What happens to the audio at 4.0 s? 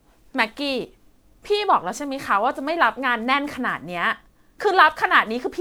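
At 4.0 s, as across the whole clip, the speech shows generation loss, likely from being re-encoded as MP3 around seven times at roughly 128 kbit/s. Each pass requantises on a shifted frame grid, so the sound turns swirly, smeared and hollow, with blurred attacks.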